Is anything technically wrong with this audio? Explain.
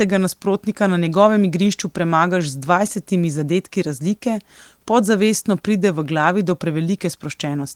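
No, nothing is technically wrong.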